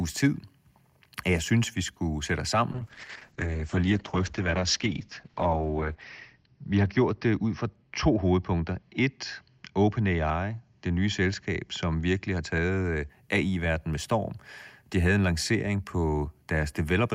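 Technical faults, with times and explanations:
2.77 to 13.15 s, call bitrate drop: just after "vi skulle sætte os" the call's bandwidth estimate collapsed and the encoder was forced to spend far fewer bits, consistent with a fall from about 64 kbps to about 8 kbps, held at its lowest for roughly 3.5 s. The coarser coding makes the speech rough and watery, and the audio bandwidth shrinks from 20 kHz to 6 kHz, so it turns muffled until the rate climbs back.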